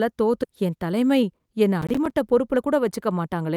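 A short speech recording has three distinct transport and playback faults. At 0.43 to 0.45 s there is a skip ahead: playback jumps forward with no fill at all, so around seven-tenths of a second of speech simply never plays and the two sides are butted together. That points to audio being discarded while later material was already queued. Unlike a dropout or concealment, there is no silence, hiss or smeared tone at the join, only missing content and an abrupt splice. From 0.61 to 3.49 s a jitter buffer speed-up follows. The receiver, holding more audio than it targets, trims tiny pitch-period pieces again and again, so the speech runs at about 109 percent speed while pitch stays put, shedding roughly a third of a second overall and sounding hurried. That steady pitch is what separates it from a simple sample-rate mismatch, which would raise the voice as it quickens. Between 1.82 and 2.14 s, within that faster stretch, a processor overload crackle rides on top. 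Short buffers, on the order of 5 ms each, repeatedly miss their deadline and play out as silence, about fifteen of them in a burst. The result is a gritty, tearing crackle that stops once the load passes. It differs from the single skip because the gaps are tiny, many and clustered, leaving the speech audible beneath the texture.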